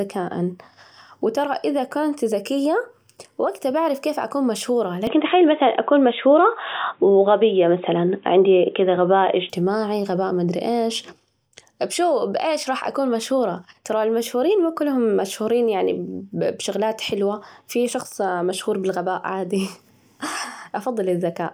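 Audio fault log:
5.07–9.50 s: input switched to a poorer device. The speech turns dull and narrow, with nothing above 3.8 kHz, then clears again. The level shifts by roughly 5 dB. Faint new background noise appears. No gap at the switches. Likely a change to a lower-grade microphone.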